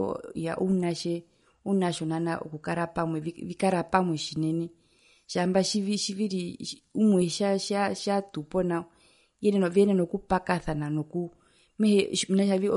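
From start to finish the speech sounds watery and swirly, with a metallic chirp on s sounds and softened, smeared consonant attacks, and nothing is heard above 11.2 kHz. The likely cause is MP3 compression at a low bitrate, consistent with about 48 kbps. Starved of bits, the encoder cuts the treble at a fixed point and drops weak frequency components, which flicker in and out between frames and produce the swirling, chirpy artefacts.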